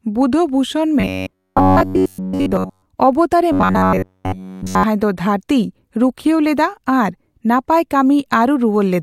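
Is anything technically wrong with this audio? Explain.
Yes. Robotic sound from repeated short buffers appears from 1.0 to 2.88 s and again from 3.52 to 4.84 s. The speech becomes a rigid metallic buzz at about 94 Hz that only loosely tracks the syllables, over most of the first stretch and throughout the second. The likely cause is audio arriving too seldom, so the player loops the last 10.7 ms of sound in place of the missing material, and that fixed loop length sets the buzz pitch.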